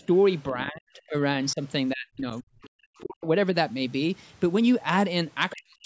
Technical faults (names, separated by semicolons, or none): other side's voice leaking through; speech suppressed in double talk